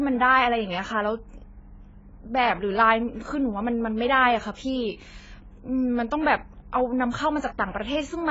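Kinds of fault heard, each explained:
AAC compression: The speech runs through the whole clip with nothing above 7.6 kHz and heavy damage: dull, smeared, with a warbling, fizzy edge on sibilants. This points to low-bitrate coding, likely AAC-LC at around 16 kbps.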